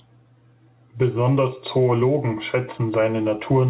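From start to finish, the level seems to breathe with a swing of about 10 dB, and loud and quiet passages sit squashed close together. This is gain pumping: the input was likely driven far too hot, with a fast limiter or compressor clamping down on each peak and releasing in the gaps. The pumping rides on narrowband call audio with nothing above 4 kHz.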